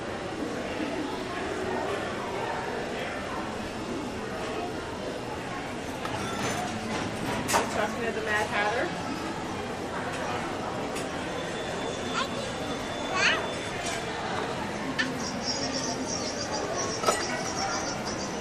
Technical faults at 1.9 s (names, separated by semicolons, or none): none